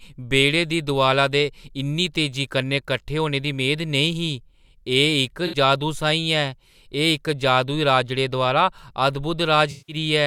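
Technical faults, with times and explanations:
5.47–5.56 s: AAC frame loss with concealment. A smeared, phasey patch of about 64 ms, fitting three lost frames, rebuilt from the last good spectrum rather than cut to a hard gap or click.
9.71–9.96 s: AAC frame loss with concealment. A longer smear of about 170 ms, fitting eight lost frames, where the decoder stretches old spectral content with scrambled signs or interpolated energy instead of leaving a clean dropout.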